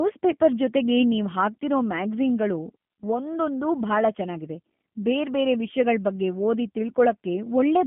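Speech throughout carries plainly audible G.729 codec damage, rough and synthetic, which fits 8 kbit/s coding that rebuilds it from a vocal tract filter and sparse pulses. A spectrogram shows a line band of 150 Hz to 3.4 kHz, with nothing above 3.6 kHz.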